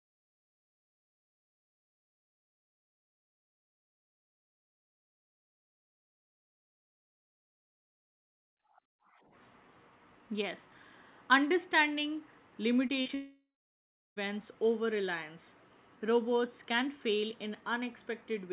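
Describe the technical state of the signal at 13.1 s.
A brief smear runs from 13.01 to 13.07 s and again to 13.1 s: short concealed packet loss, with the receiver stretching the last sound over roughly 40 ms and 20 ms gaps. From 13.15 s, a fading buzz gives way to about 0.69 s of silence, and the sound resumes at 14.18 s minus the missing stretch, likely a long network dropout.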